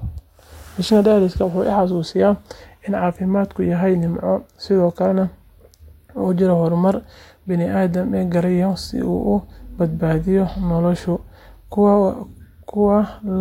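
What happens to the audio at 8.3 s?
Nothing goes wrong at 8.3 s; the speech runs on intact through that moment, with no dropout, click, distortion or other fault.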